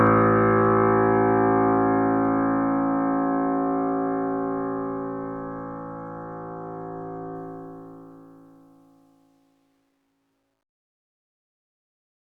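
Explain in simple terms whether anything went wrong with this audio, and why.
Yes, something went wrong during the ending fade-out, which starts around 7.4 s. From 7.35 s the fading sound turns gritty, and from 8.84 s to the end it is at its worst. This is truncation distortion on a fade: the volume was lowered with too little detail (it sounds like roughly 11 bits), so the quietest part becomes coarse steps.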